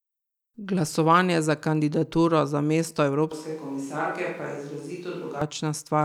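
At 3.32 s, right after "za kandidaturo za mesto", the speech abruptly turns roomy and hollow, thinner in the low end and a few decibels quieter, with background noise rising to roughly 30 dB below the speech. It snaps back at 5.42 s. This is a switch to a distant microphone, likely because the close microphone dropped out. On the waveform the envelope shrinks and smears with reverberant tails, and the spectrogram shows weaker bass and a raised noise floor between syllables.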